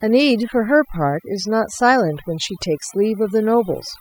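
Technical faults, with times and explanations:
Throughout, overdone noise removal: lowered background with twinkling specks, because an over-strong noise reducer cut frequency bands near its noise estimate.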